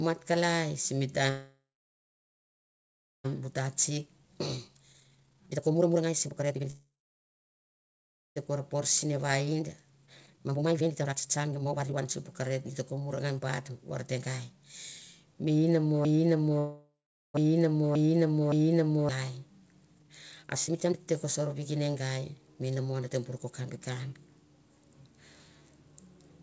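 Speech over a call, band-limited to nothing above 8 kHz, which fits a G.722 wideband link. Right after "mat kalai sim" there's a call audio freeze from 1.30 to 3.26 s: the last sound smears briefly, then goes silent, most likely because packets stalled and the jitter buffer ran dry. The same thing happens again at 6.70 to 8.38 s and 16.59 to 17.36 s, with nothing lost, just gaps pushed in. After each stall you get jitter buffer speed-up, where the receiver trims pitch periods to claw back delay. The speech sounds hurried at the same pitch: 3.33 to 6.70 s at 148% drops roughly a second and a half, 8.48 to 14.65 s at 131% drops about two seconds, 15.13 to 15.58 s runs at 111%, and 19.95 to 23.46 s runs at 122%. From 16.05 to 19.09 s there's also a broken-record loop: a 568 ms fragment repeats exactly four times back to back, likely from a stalled stream resending its last chunk, so whatever should have played there is gone.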